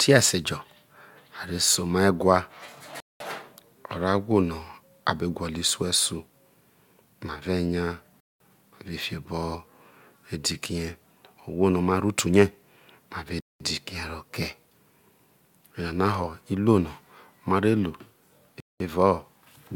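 Gap between chunks at 3.00, 8.20, 13.40 and 18.60 s: the speech arrives in 5-second chunks with 200 ms of inserted silence at each join, heard as short holes.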